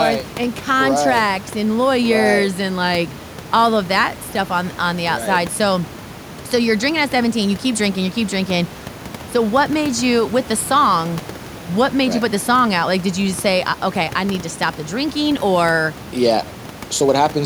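Nothing goes wrong in this speech recording; the only other sound is the room's own background noise, sitting about 17 dB below the speech.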